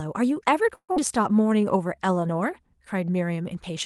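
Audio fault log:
0.75 to 0.99 s, long network dropout: the speech breaks off, and the receiver stretches the last sound into a buzzy fill for about 207 ms that fades away, leaving roughly 80 ms of near-silence. When the speech resumes, about 120 ms is simply gone, most likely because packets stopped arriving. Unlike a brief packet loss, the concealment clearly gives out. The timing afterwards sits a little later, by around 50 ms.
1.43 to 2.21 s, jitter buffer slow-down: the speech plays at about 88% speed with the pitch unchanged. Sounds are drawn out where single pitch periods repeat back to back, adding about 105 ms as the buffer rebuilds its reserve. Unlike plain resampling, the voice does not drop in pitch. Unlike a dropout, nothing goes missing, and through the Opus call path the top end still reaches about 12 kHz.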